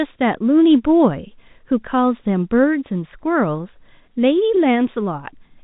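No technical faults can be heard anywhere in this speech clip. The sound carries the narrow band of G.711 telephone coding, with nothing above 4 kHz, and any quantisation noise is faint at most.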